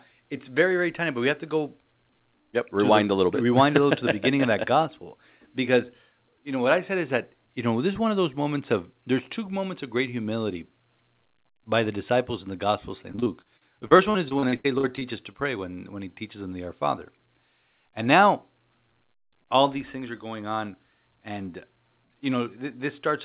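Right after "in the gospel of", from 13.12 to 15.36 s, the speech turns choppy and robotic, with short holes up to 79 ms long. This is repeated packet loss: missing stretches were patched by extending the preceding sound, covering roughly a quarter of that span.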